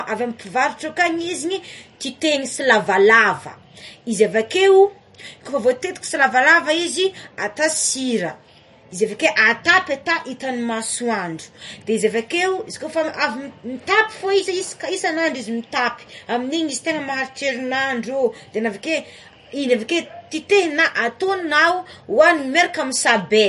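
A low-bitrate encode, likely MP3 compression at a rate that fits about 40 kbps, runs through the whole speech clip. The encoder cuts everything above 11.1 kHz and drops weak frequency lines frame to frame, so the voice sounds dull, watery and swirly.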